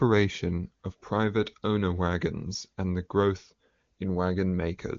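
Careful listening to this speech recording turned up nothing that stood out, with the sound showing the band limit of the AMR wideband (HD Voice) codec, which leaves nothing above about 7.3 kHz.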